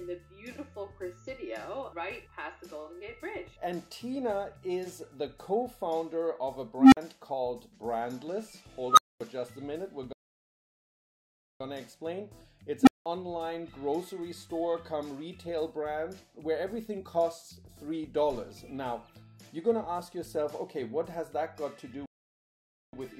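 At 6.79 s an unstable filter briefly takes over. A recursive filter's feedback runs away, so a low tone of roughly 300 Hz swells over about 137 ms into a loud, clipped hum and then collapses into about 46 ms of silence as the values overflow and the filter resets. At 8.89 s it happens again, higher and faster: a squeal near 1.5 kHz builds in about 80 ms and is followed by a longer 232 ms gap. On a spectrogram each event is a single bright horizontal line that thickens and sprouts harmonics as clipping sets in. On the waveform it is an exponentially widening envelope flattening as it clips, then a dead-flat section.

From 10.13 s to 11.61 s a playback stall drops the output to silence for about 1.47 s, likely because the player ran short of data or its thread was blocked. The audio then resumes.

At 12.82 s the unstable filter returns with a roughly 300 Hz tone that rises in only about 56 ms and is followed by around 186 ms of silence.

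From 22.06 s to 22.93 s a second stall silences the sound for about 0.87 s. Both stalls show as blank vertical bands on the spectrogram and as flat silent stretches in the waveform.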